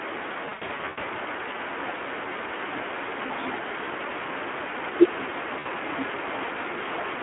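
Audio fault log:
throughout: Speex codec. The sound is hoarse and grainy, with the noisy buzz of a CELP coder starved of excitation bits, which fits a low setting near 11 kbps. It is held to a telephone band of about 300 Hz to 3.4 kHz. On a spectrogram, energy stops sharply at 3.4 kHz and the harmonics look smeared and speckled with noise instead of clean striations. The waveform looks roughened between pitch pulses.
0.45–1.04 s and 5.59–5.67 s: VoIP packet loss concealed by the speech codec. In the first stretch, 360 ms of audio is missing, scattered over 560 ms, with the longest gap 100 ms. At 5.59 s another 60 ms is lost. The decoder fills each gap by repeating its last pitch and filter at falling gain, so the sound turns into a fading buzzy tone or coloured noise and stays weak for a moment after recovery. On a spectrogram, frozen flat harmonic bands appear. The waveform shows decaying, oddly periodic envelopes.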